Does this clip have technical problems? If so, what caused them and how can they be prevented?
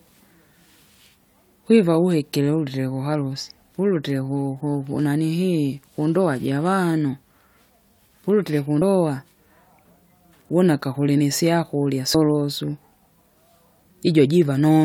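Yes. Compressed frames are skipped at 8.82 s and again at 12.14 s, just after "wuna akakulimi isyakurya". Each time the speech jumps ahead by roughly 70 ms, which fits about two 32 ms frames that were lost or rejected by the decoder. Unlike a dropout or buffer underrun, no silence is inserted. Error-protected transmission and checked file integrity prevent it.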